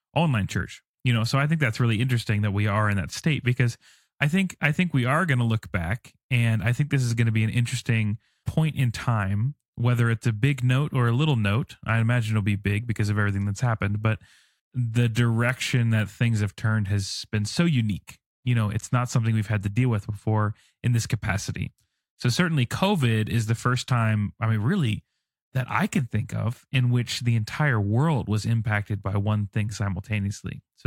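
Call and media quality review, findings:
No faults heard anywhere in the speech recording; no findings to log.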